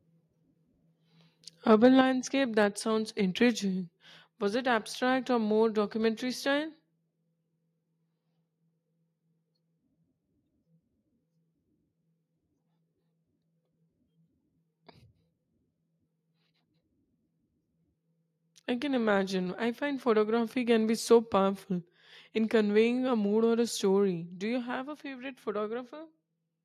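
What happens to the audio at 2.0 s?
At 2.01 s the speech and its background drop abruptly by about 6 dB in a single step, just before "that sounds intriguing". This is a microphone volume stepped down, likely the call software cutting the device's input volume after judging it too loud.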